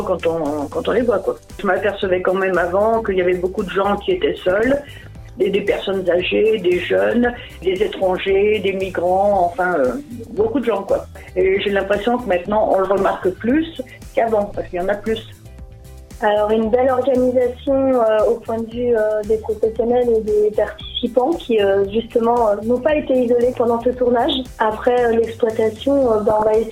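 DAB burbling breaks out at 4.49–5.16 s, 9.89–10.47 s, 12.74–13.22 s and 26.30–26.49 s. Bit errors of up to about half a percent slip past error correction, corrupting MP2 samples and scale factors so single sub-bands jump for up to a frame. The result is short noise blips and level jumps in single sub-bands, unlike the silent gaps of a dropout.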